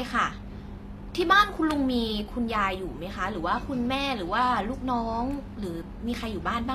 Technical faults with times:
0.00-6.75 HE-AAC compression

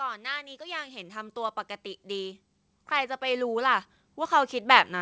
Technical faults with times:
0.14-5.01 automatic gain rising

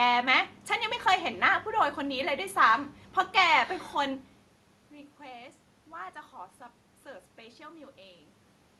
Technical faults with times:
none

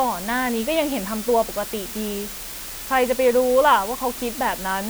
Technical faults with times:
0.00-4.89 low bit depth with dither

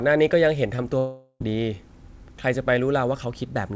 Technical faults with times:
0.76-0.80 short concealed packet loss
0.98-1.42 long network dropout

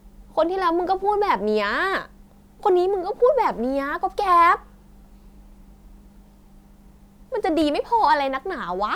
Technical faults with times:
none

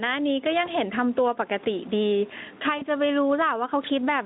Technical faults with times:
0.00-4.25 gain pumping
0.65-0.71 VoIP packet loss concealed by the speech codec
2.77-2.83 VoIP packet loss concealed by the speech codec

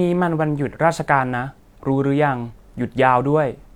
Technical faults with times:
2.46-2.53 damaged data in a compressed stream

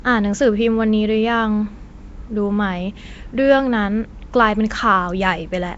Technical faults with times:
0.00-5.78 Nellymoser compression

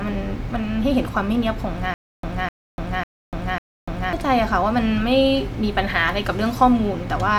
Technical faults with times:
1.94-4.13 stutter with silent gaps

